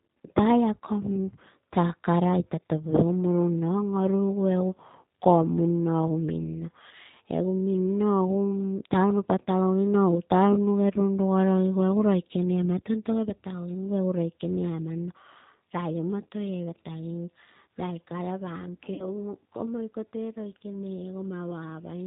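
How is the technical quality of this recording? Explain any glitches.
Technical quality is limited by low-bitrate telephony coding, with one brief dropout near the end.

G.729 codec, throughout: speech rebuilt from a filter, pitch predictor and sparse pulses, band-limited below 4 kHz, sounding plainly rough and synthetic, consistent with an 8 kbit/s stream.

VoIP packet loss concealed by the speech codec, 18.94 to 19.06 s: about 40 ms missing, which fits two lost packets. The decoder extrapolates from its last pitch and filter with fading gain, and the speech stays weakened briefly afterward.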